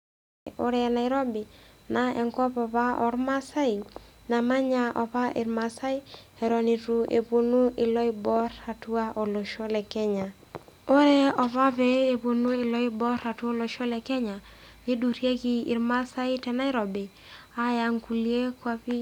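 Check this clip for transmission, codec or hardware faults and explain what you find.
One fault is present, a cut-off start. The recording began late, so the opening 0.47 s is digital silence and the speech then enters abruptly at 0.47 s, already mid-sound, with no natural attack or lead-in before it.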